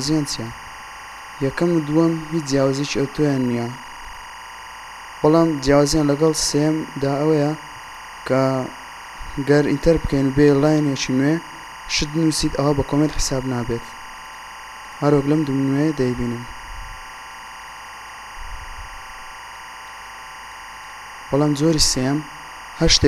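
Timecode bleed runs throughout: a steady chirping warble about 20 dB below the sound, fitting 23.976 fps code, shows as alternating bands near 1 and 2 kHz.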